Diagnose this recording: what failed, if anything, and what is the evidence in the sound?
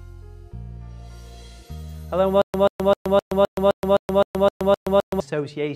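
From 2.42 s to 5.20 s the audio falls into a stutter with silent gaps: the same 135 ms burst returns 11 times at an even 258.5 ms period, each followed by about 123 ms of dead digital silence. The stage is playback or the stream buffer. The likely cause is a stalled feed, where each retry replays the last buffered fragment and then runs dry, so the audio due in that stretch is lost.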